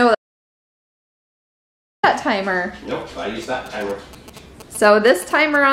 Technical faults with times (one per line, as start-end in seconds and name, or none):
0.15-2.03 audio dropout to silence
3.43-5.56 GSM signalling bursts